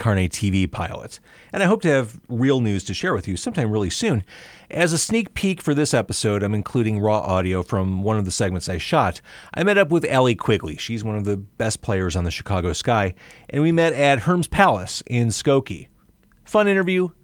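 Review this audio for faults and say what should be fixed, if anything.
Nothing stood out on listening to this recording, so there is nothing here that needs fixing.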